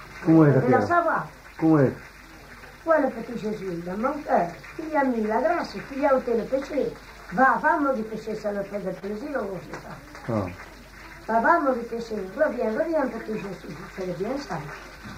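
The sender's clock runs roughly 2 percent slower than the receiver's, so this is clock drift between sender and receiver. Audio arrives a little slower than it is played out, and the jitter buffer keeps drifting toward empty. Across the whole clip this leaves the pacing feeling faintly dragged and uneven rather than clearly broken, with small hiccups recurring at irregular points instead of at any steady beat.

From 0.40 s to 15.00 s the receiver makes repeated timing corrections to cope with that shortfall. Because the sender is slow, every edit goes the same way: short pieces are repeated or stretched, never cut, which runs playback at about 98 percent speed. Over the stretch this adds roughly a third of a second of material. Each repeat is tiny, and the result is a slightly lagging, unsteady tempo with occasional soft stutters at uneven spacing.

At 8.99 to 9.04 s there is a short stall from a late packet. 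The buffer ran dry because a packet came in after it was due, and the receiver held the last sound for 25 ms until it arrived, then continued from the same place. Nothing is lost. What you hear is a brief sustain or smear, with a faint buzz or dip, and the delay afterward sits 25 ms longer.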